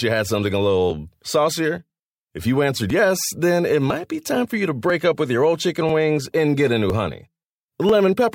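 From 0.90 s to 7.89 s, the speech carries a steady series of small ticks, about seven of them, one every 1.0 s (0.996 s), each heard only while the signal is present. These are periodic USB or driver dropouts. At each interval something stalls the USB bus or the audio driver, and a few milliseconds of audio are skipped outright rather than filled with silence, so the waveform jumps and produces the regular click.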